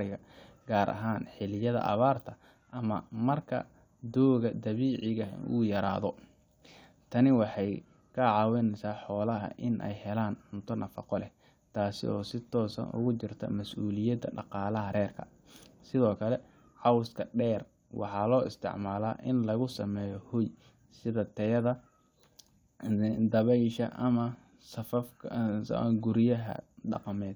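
No technical faults can be heard anywhere in the recording, and the signal keeps its level, timing and continuity steady throughout.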